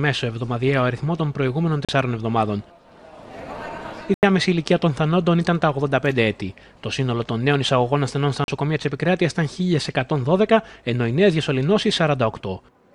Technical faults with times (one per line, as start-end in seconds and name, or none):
1.85-1.89 Bluetooth stall
4.14-4.23 Bluetooth stall
8.44-8.48 Bluetooth stall